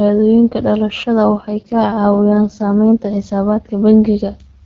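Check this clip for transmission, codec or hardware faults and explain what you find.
One transmission fault: an AMR rate drop from 1.24 to 3.25 s. The speech turns rougher and more synthetic, consistent with the link forcing a switch from 12.65 to 6.6 kbit/s. The spectrogram shows the same bandwidth with no gap, but harmonics become smeared and noisier.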